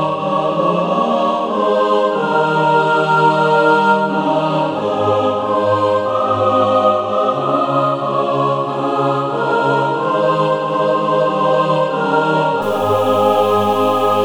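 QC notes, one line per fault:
12.62–14.25 s, low bit depth without dither: the last stretch of the clip turns grainy, with a distortion that rises and falls with the sound itself, and the quietest moments sputter or drop out. Only about 6 bits are in use and the values were truncated rather than dithered, so the rounding error tracks the signal, sitting roughly 25 dB below it. This is likely a requantisation step applied without dither.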